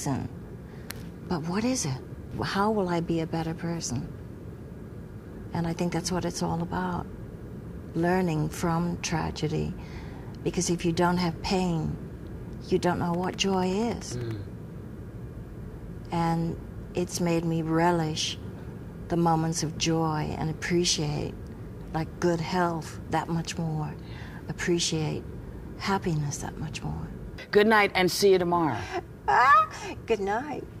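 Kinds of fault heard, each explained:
Train of clicks: a burst of near-identical clicks at a regular 10.3 per second runs from 13.14 to 14.32 s, roughly fifteen pulses sitting about 5 dB above the sound, heard as steady ticking; likely interference from nearby equipment or a faulty connection or power supply.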